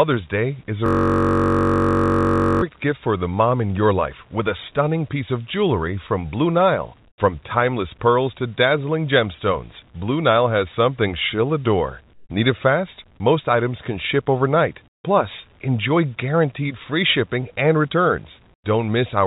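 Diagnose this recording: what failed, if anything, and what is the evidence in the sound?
At the driver or buffer stage, a system hang loop: the host stalled while the audio hardware kept replaying the same ring buffer. From 0.86 to 2.62 s, just before "gift for the mom", one 21.33 ms slice repeats around eighty times. At a 46.9 Hz repetition rate, the audio becomes a steady, pitched buzz rather than a stutter. The loop length fits a 1024-sample buffer at 48 kHz.

In call processing, the pauses show comfort noise in place of the background, likely from discontinuous transmission, with the receiver synthesising noise during silence. The real room tone, about 37 dB below the loud passages, is replaced by flat, featureless hiss for 100 to 160 ms at 7.08, 12.14 (after "has something she'll adore"), 14.88 (after "items can ship overnight") and 18.54 s. Each gap also drops in level, by about 10 to 23 dB. 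Across the clip nothing is heard above 4 kHz, as expected of a narrowband call path.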